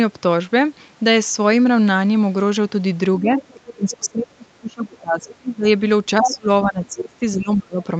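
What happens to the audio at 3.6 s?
The echo canceller likely failed to fully remove the far end's loudspeaker sound from the microphone, so the other side's voice is leaking through from 3.19 to 3.74 s. It sits well under the talker, roughly 20 dB down, as a faint second voice. Inside that stretch, both sides are talking at once, and the canceller, likely unable to tell its own talker from the echo, turns everything down. This is speech suppressed in double talk, from 3.56 to 3.61 s: the talker's voice dips by around 10 dB for about 50 ms.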